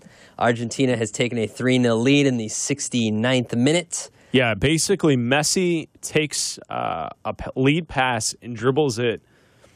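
Nothing in this speech recording stood out as a technical fault on listening.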